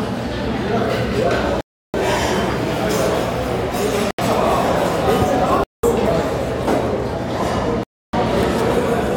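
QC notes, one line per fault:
1.61–1.94 s, 4.11–4.19 s, 5.64–5.84 s, 7.83–8.14 s, Bluetooth stall: the sound cuts abruptly to silence for about 331, 77, 198 and 299 ms, then resumes without a fade-in. This is likely the wireless link holding up packets until the headset's buffer ran dry. Unlike a gate or level dropout, there is no tail in the gaps, and unlike a glitch loop, nothing repeats on resumption.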